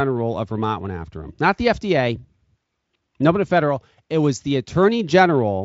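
Nothing stood out on listening to this speech recording.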